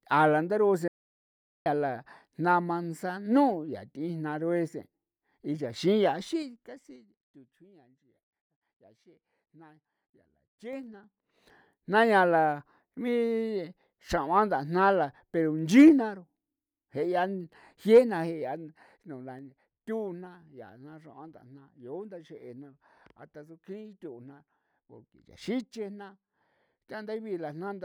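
Right after "la ndaru'u se", at 0.88 s, there's an audio dropout to silence: dead silence, no room tone, until 1.66 s, so about 0.78 s of speech is simply gone. That's likely a lost input, such as a disconnected device, a failed link or a stray mute.

Then there's zipper noise on three fades, each moving in 3 dB jumps with nothing smoothing them. From 6.22 to 7.20 s the level drops about 20 dB, ticking around seven times a second. From 10.68 to 11.42 s it climbs back about 20 dB at roughly ten clicks a second, ending just before "jna yaa". From 18.34 to 19.69 s a slower drop of about 10 dB steps roughly twice a second.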